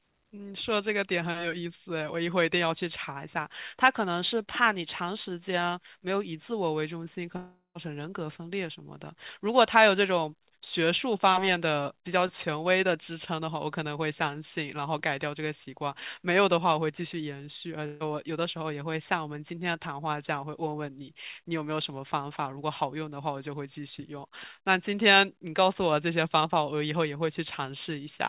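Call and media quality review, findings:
Long network dropout, 7.37–7.78 s: about 0.39 s of audio gone, last sound stretched into a fading buzz or hiss, then roughly 0.1 s of silence before resuming. Likely jitter-buffer starvation. Unlike a packet-loss burst, concealment runs out and goes silent.

Burst of packet loss, 17.86–18.03 s: about 150 ms missing, filled by a held, decaying continuation of the preceding sound with no silent stretch. Jitter buffer concealing consecutive lost packets. Shorter than the dropout, bridged end to end, through a 4 kHz-limited band consistent with G.711 A-law at 64 kbps.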